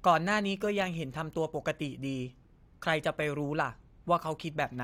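Speech recording with no audible technical faults anywhere.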